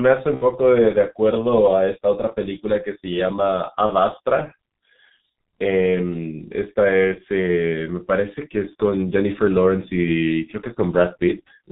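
Throughout, the speech passes through a G.723.1 codec at a low rate, consistent with about 6.3 kbit/s. Nothing above 4 kHz survives and its coarse, slowly updated voice model is heavily strained, so speech sounds muffled and hoarse, with consonants smeared.

At 0.35 to 0.43 s and again at 3.86 to 3.91 s, VoIP packet loss concealed by the speech codec occurs. Roughly 60 ms and then 30 ms of audio, which fits two frames and then one, went missing. The decoder extended its last pitch and filter at falling gain, giving a brief, fading smear, and the voice stays weak or distorted for tens of milliseconds after packets return.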